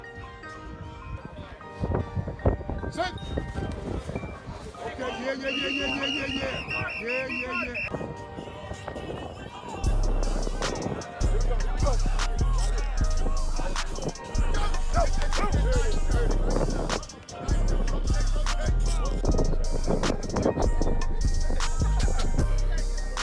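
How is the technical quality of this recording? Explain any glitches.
Nothing stood out on listening; no glitches or other technical problems could be heard anywhere in the recording.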